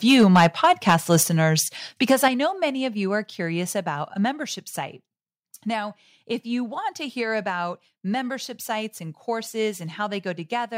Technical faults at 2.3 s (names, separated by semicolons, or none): microphone overload; microphone volume stepped down